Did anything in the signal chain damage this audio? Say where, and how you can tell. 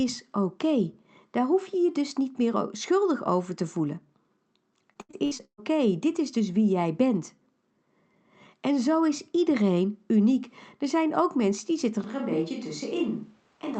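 Yes. Between 4.93 and 5.60 s, just before "dit is dus wie", there is repeated packet loss (robotic sound). That points to the network and jitter-buffer stage of the call path. Six separate dropouts fall in that span, the longest about 130 ms. Each one is bridged by the decoder's concealment, which keeps extending the last sound it received, so roughly half of the stretch is synthetic fill. That fill gives the choppy, robotic texture.

From 12.04 s, right after "ook mensen die zitten", through to the end, the sound abruptly becomes roomy and hollow. The low end thins out, the level falls by about 5 dB, and background noise rises to sit roughly 35 dB below the speech. The change is instant and never reverts, which is likely a switch to a distant microphone at the capture stage, with the close mic's feed lost and a farther pickup taking over. The Opus call path keeps its band limit near 8 kHz across this change.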